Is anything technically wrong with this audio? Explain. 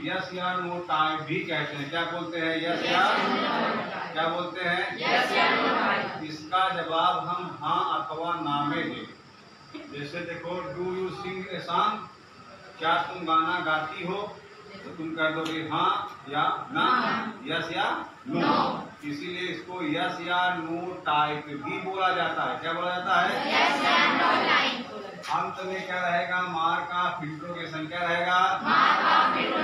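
No, nothing technically wrong stood out on listening to this audio.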